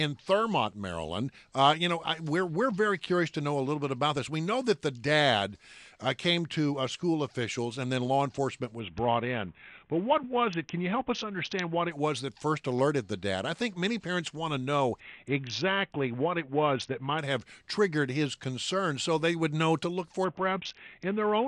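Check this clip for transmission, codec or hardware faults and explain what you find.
There's a Bluetooth SBC bit pool drop three times: 8.79 to 11.91 s, 15.00 to 17.19 s, and 20.24 s to the end. The congested link starved the encoder, which fits the bit pool falling from 28 to 5 (about 54 kbps). The treble goes dull and gritty noise creeps in.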